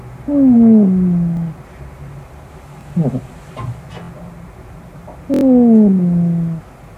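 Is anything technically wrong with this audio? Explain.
Yes, there's a repeated buffer problem, showing up four times. At 1.37 s and 2.81 s a roughly 23 ms chunk plays one extra time. At 4.04 s it plays twice more, and at 5.34 s four more times, running to about 5.43 s. The playback device didn't get fresh audio in time, so it replayed its last block, which fits a 1024-sample buffer. Each repeat has a hard join, heard as a quick stutter or buzz that gets longer with more repeats.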